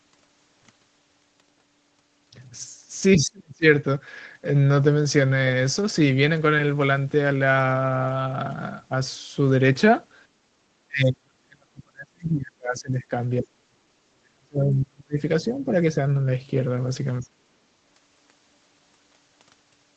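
From 3.17 to 3.66 s, and again at 10.87–13.12, 13.4–15.19, 15.41–15.72 and 17.21–17.32 s, the speech sinks or breaks up, likely speech suppressed in double talk. The waveform envelope collapses by up to about 40 dB, and the spectrogram shows harmonics thinning into gaps.

At 10.44–10.59 s, background gated by the echo canceller pulls the room noise down about 11 dB for a moment. It appears as a brief dark notch in the noise floor.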